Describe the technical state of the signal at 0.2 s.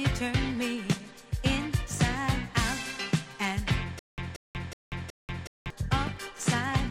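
At 0.2 s the signal is intact, with no audible fault at that moment.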